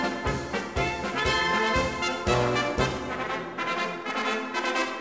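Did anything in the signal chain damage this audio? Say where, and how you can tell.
Yes: a sample-rate conversion, likely from 44.1 kHz to 16 kHz, skipped its filter, so content above 8 kHz folds back as gritty aliasing, roughly 20 dB down, throughout.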